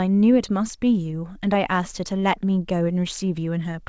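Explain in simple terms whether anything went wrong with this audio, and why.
Nothing went wrong: the speech simply came through a normal call connection using the G.722 codec, which carries sound only up to 8 kHz, so the missing top end is ordinary for that kind of call, not a fault.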